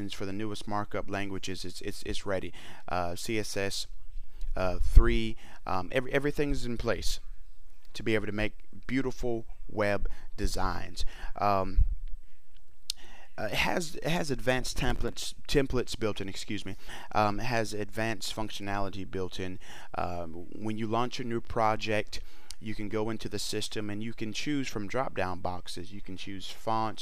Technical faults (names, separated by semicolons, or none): processor overload crackle